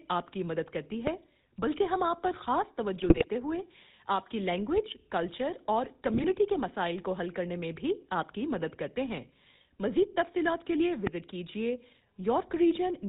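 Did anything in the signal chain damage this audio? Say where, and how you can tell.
Yes. Throughout, the speech has the buzzy, gravelly roughness of the GSM full-rate codec, with nothing above 4 kHz. The coarse pulse excitation that regenerates the voice fits a 13 kbps full-rate coder. Unlike plain band-limiting, the roughness is built into the voicing itself.

There is a loud pop at 1.07 to 1.09 s and again at 11.07 to 11.09 s, each a single sharp hit about 15 dB above the speech. The speech carries on unbroken underneath, so this is something added to the signal, likely a step from a plug, switch or static in the analogue wiring, rather than the decoder losing data.

GSM bit errors show up in the network stage at 2.98 to 3.25 s and 6.14 to 6.25 s. The voice breaks into squawks and gargling as corrupted filter, pitch and gain values warp the spectrum frame by frame, which fits an error rate near 3 %. 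Unlike the clean pops, these garble the speech itself.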